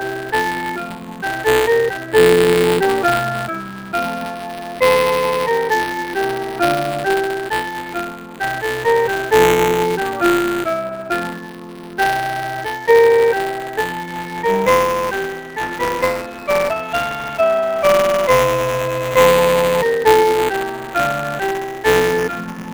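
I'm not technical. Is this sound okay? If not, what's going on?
No. Two problems run through the whole clip, and a third shows up at set moments.

The first is a noise suppressor applied to music or sounds. This is a filter built to clean up speech, but it was left switched on for this audio. It mistakes steady tones and lingering tails for background noise and turns them down. Sharp starts get through, but held sound sinks. The result is a pumping, uneven level throughout.

The second is buffer tearing. Audio moves through the system in small chunks, which fits a 256-sample buffer. The part writing those chunks and the part playing them have slipped out of step. A small slice of each chunk repeats sound from about a hundredth of a second earlier, with hard joins. You hear it as a robotic buzz at 188 Hz, present whenever there is sound.

The third problem is sound cut by the noise suppressor. 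At these moments the suppressor pushed the sound down harder than elsewhere. Steady or fading parts drop noticeably or die away too early. Sudden hits survive. It happens from 0.18 to 2.14 s, 3.62 to 4.81 s, 6.08 to 6.6 s, 7.64 to 8.41 s, and 20.67 s to the end. The longest and deepest stretch runs from 10.95 to 16.93 s.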